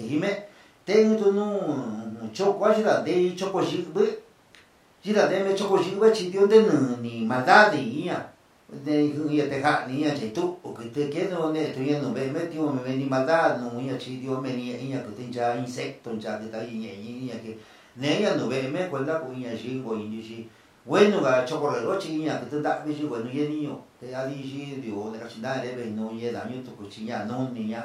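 No audible technical faults.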